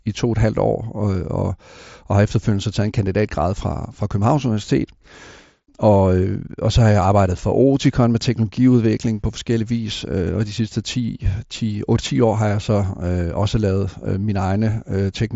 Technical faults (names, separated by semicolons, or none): none